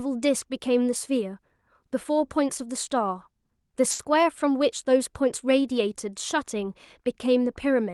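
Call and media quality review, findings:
Short stall from a late packet, 3.91 to 4.01 s: speech held and stretched for about 80 ms, slight buzzy sustain, no audible loss. Jitter buffer ran dry; receiver concealed until the packet arrived, adding roughly 80 ms delay. Opus call path, band-limited near 12 kHz.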